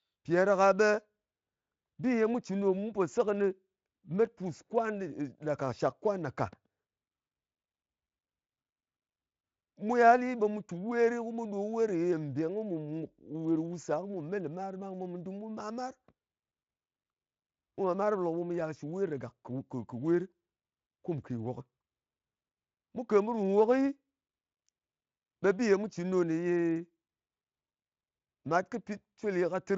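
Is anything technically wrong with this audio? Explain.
No, nothing here is technically wrong, and the Speex coding at around 28 kbps is working as it should.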